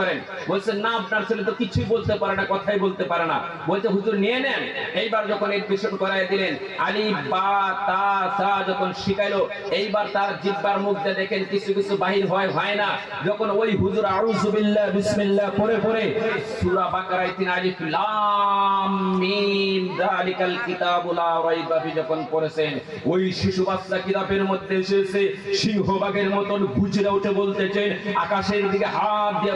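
No technical faults are audible.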